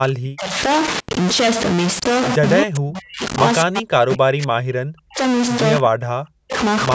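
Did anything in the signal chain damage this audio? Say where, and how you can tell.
Yes. A stuck bit runs through the whole clip, at the converter or its data lines. The speech carries distortion, and even the pauses fill with a gritty noise. That points to one data bit likely held at a fixed value, offsetting roughly half the samples by that bit's weight.

Speech suppressed in double talk appears at 0.0–0.57 s, 2.62–3.23 s, 3.63–5.21 s and 5.83–6.54 s, in the call processing stage. The talker's level dips by up to about 40 dB or drops out in pieces, likely because the echo canceller could not separate the talker from the loudspeaker echo and turned both down.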